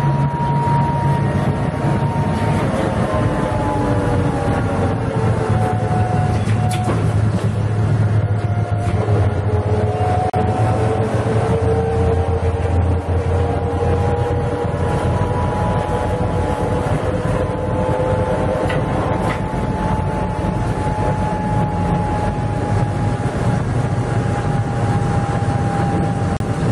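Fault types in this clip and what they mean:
Gap at a join of encoded pieces: Separately encoded pieces were joined untrimmed, leaving encoder start delay and end padding in place. A gap of about 38 ms opens at 10.30 s and one of 36 ms at 26.37 s. Edges are smeared by the codec. Sound then resumes where it stopped.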